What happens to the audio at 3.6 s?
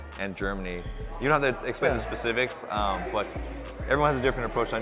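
Nothing goes wrong at 3.6 s; the audio carries on intact through that moment, still band-limited below 4 kHz as it is throughout by the telephone-grade call path.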